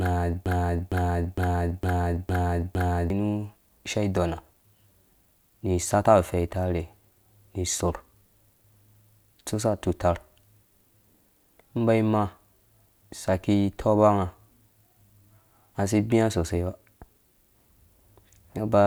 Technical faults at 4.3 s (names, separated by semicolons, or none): none